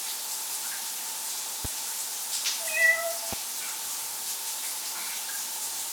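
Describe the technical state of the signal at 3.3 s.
A single loud pop sits at 3.33–3.35 s, peaking roughly 15 dB above the surrounding sound, likely from a voltage pulse such as a plug, switch or static discharge. Unlike a dropout, nothing is lost: the sound carries on underneath the brief thump.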